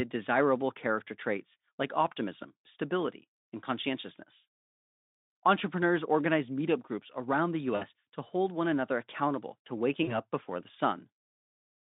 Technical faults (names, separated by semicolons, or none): VoIP packet loss concealed by the speech codec